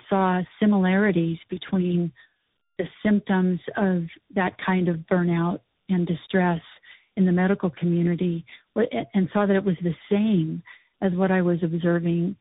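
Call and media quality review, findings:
Tandem speech coding, whole clip. Rough, muffled, warbly speech; nothing above 3.8 kHz. Two speech codecs in series: AMR-NB 7.95 kbit/s, then G.711 A-law, then CVSD 64 kbit/s. Each re-encodes the previous decoder's artefacts. Roughness compounds.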